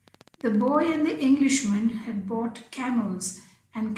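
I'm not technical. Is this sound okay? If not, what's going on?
No. There is a train of clicks from about 0.08 to 0.96 s, a steady ticking of about 15 clicks per second, roughly fifteen in all, each about as loud as the speech itself. Because the clicks are evenly spaced and nearly identical, something is likely injecting a short electrical pulse into the recording over and over, such as interference from nearby equipment or a faulty connection or power supply.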